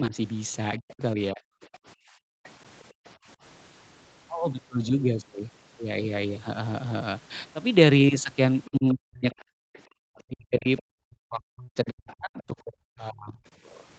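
From 0 to 1.43 s the talker's level collapses in pieces, about 0.4 s in total and by roughly 40 dB at the deepest. This is speech suppressed in double talk, likely because the echo canceller could not separate the near talker from loudspeaker echo and turned both down.

From 0.9 to 3.09 s the other side's voice leaks through, faint at roughly 25 dB under the talker. Residual loudspeaker echo is the likely cause, with the echo canceller failing to subtract all of it from the microphone.

Between 1.78 and 3.05 s the room background is gated by the echo canceller. The canceller clamps the microphone while the loudspeaker plays, so the ambience drops by up to about 40 dB for roughly 0.7 s altogether and then returns.

The pattern repeats later. Leakage of the other side's voice runs from 8.64 to 13.86 s, again around 25 dB down, with the likely cause once more being residual echo. Overlapping it, from 8.69 to 13.43 s, the talker is suppressed in double talk for about 3 s in total, with dips reaching roughly 40 dB. 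A short background gate, about 0.3 s long, falls between 9.52 and 9.98 s.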